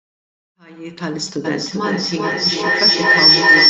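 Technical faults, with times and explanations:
1.44 to 3.7 s, feedback howl: the call's loudspeaker is feeding back into a microphone in the same room, so each trip round the loop returns louder. It narrows to a shrill tone near 5 kHz, repeating roughly every 0.4 s, peaking about 11 dB above the speech and still howling at the end.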